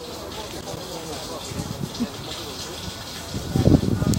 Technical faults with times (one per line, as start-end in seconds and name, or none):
0.40-0.77 loose connector crackle